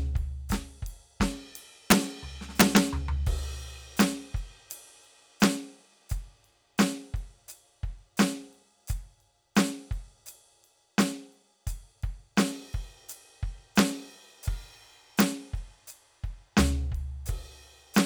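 Integer overflow cracks hit the music at 1.90, 2.60 to 2.77, 4.00, 5.44, 13.79, 15.20 and 17.98 seconds. Loud peaks exceeded the integer limit, by up to about 4 dB, and wrapped to the opposite sign instead of being held. Each sounds as a violent crack, harsher than clipping.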